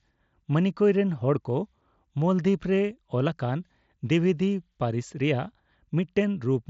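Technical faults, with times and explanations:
No faults found; the speech arrives over an mSBC Bluetooth headset link, with nothing above 7.7 kHz, as that wideband path allows.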